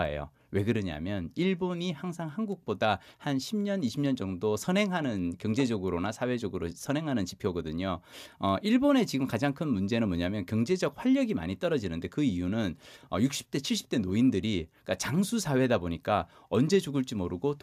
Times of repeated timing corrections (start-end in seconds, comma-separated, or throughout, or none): none